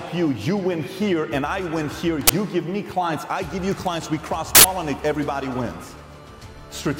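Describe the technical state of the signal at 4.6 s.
At 4.6 s there is an uninitialised buffer, running from 4.55 to 4.64 s. That is about 93 ms, which fits a 4096-sample buffer. It played before any audio was written to it. Leftover memory was read as samples, heard as a burst of digital noise.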